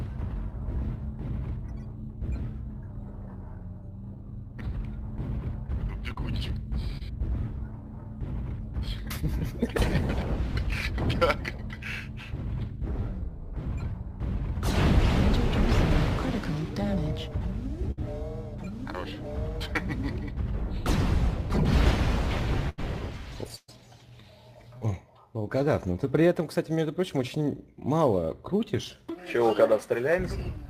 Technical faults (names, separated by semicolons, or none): short concealed packet loss; burst of packet loss